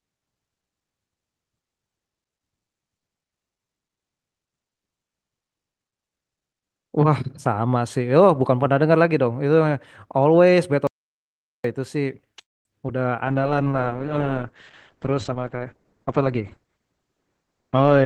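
At 10.87 s the sound cuts off abruptly into dead silence, with no room tone at all, until it returns mid-flow at 11.64 s. This is an audio dropout to silence lasting about 0.77 s. The input was likely lost for that stretch while the recorder kept writing silence, so whatever was said in the gap is gone for good.

From 12.41 s to 12.67 s there is a call audio freeze. The last sound hangs on as a fading buzz, then goes silent for about 0.22 s before the speech picks up exactly where it stopped, so nothing is lost. The likely cause is delayed packets draining the jitter buffer, which inserts roughly a quarter of a second of extra delay.

Around 12.87 to 12.90 s a brief smear or wobble interrupts the speech. This is short concealed packet loss. About 20 ms of audio never arrived in time, and the receiver papered over the hole by extending the preceding sound before blending back into the real signal.

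From 13.27 s to the end, the speech turns duller, rougher and watery. This is a call bitrate drop. The encoder was cut from 40 kbps to 9 kbps, and at that rate it also narrowed the audio bandwidth from 20 kHz to 8 kHz, which removes the upper treble and coarsens the coding.

Between 15.29 s and 16.93 s the speech sounds hurried, running at about 114% speed while keeping the same pitch. This is a jitter buffer speed-up. To work off the backlog of delayed audio, the receiver trimmed out many tiny pitch-period slices, roughly a fifth of a second in total.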